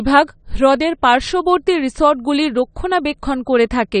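Speech that sounds dull and smeared throughout, with a fizzy, warbling texture on sibilants and no content above 9 kHz. The likely cause is AAC compression, with an AAC-LC coder discarding high bands and quantising the rest coarsely, which fits a bitrate around 32 kbps.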